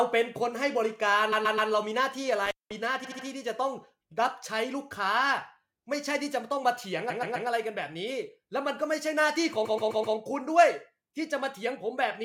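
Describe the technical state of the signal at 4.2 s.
At 4.2 s the signal is intact, with no audible technical fault at that point.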